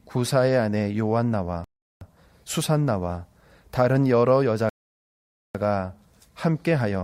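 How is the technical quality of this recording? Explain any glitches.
The recording has two audible interruptions, both moments where the speech drops out completely and then carries on.

From 1.64 to 2.01 s there is a playback stall: the speech stops mid-flow for about 370 ms of dead silence before continuing. The likely cause is the player running short of data or having its audio thread blocked, so nothing reached the output until it recovered. On a waveform this shows as an abrupt flat line cutting through active signal; on a spectrogram, a clean vertical blank band across all frequencies.

From 4.69 to 5.55 s there is a rebuffering stall. The player ran out of downloaded audio and paused until more arrived, then resumed exactly where it left off, so no speech is lost but about 850 ms of silence is inserted. It sounds like an unnatural hold in the speech. On a waveform it is a longer flat gap with matching edges on either side, and on a spectrogram a wide empty column where the harmonics simply break off and pick up again.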